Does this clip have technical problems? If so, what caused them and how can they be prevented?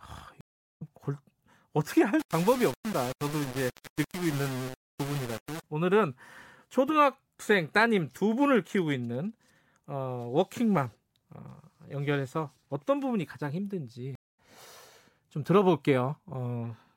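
Yes. Two stream reconnects cut the speech, at 0.41–0.82 s and 14.15–14.39 s. Each is a flat-line gap of about 0.40 s and 0.23 s, after which a fresh decoder picks up the stream roughly half a second and 0.15 s further on. A larger client buffer with seamless reconnection, resuming at the exact byte offset, prevents this.

From 2.20 to 5.64 s the speech turns gritty, with grain that tracks its loudness. Low bit depth without dither is the likely cause: rounding to about 5 bits leaves error only about 15 dB below the signal. The waveform looks stair-stepped, and the spectrogram shows a broadband haze that rises and falls with the speech. Keeping at least 16 bits and applying dither before any word-length reduction prevents it.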